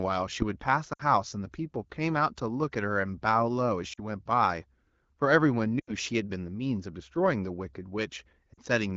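At 0.93, 3.93, 5.79 and 8.54 s, lost AMR speech frames (40 to 80 ms) make the decoder repeat and quickly fade the last sound, seen as smeared, decaying spectrogram bands.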